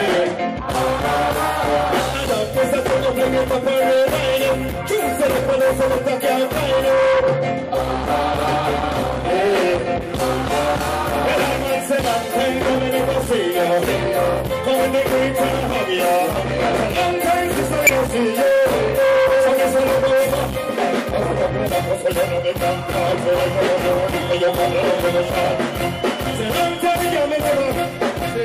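A brief glitch cuts through the audio at 2.24 s, and a slightly longer blip follows from 17.87 to 17.89 s. Both come from damaged data in a compressed stream: corrupted bytes make the decoder misread frames and lose sync until it finds the next valid header.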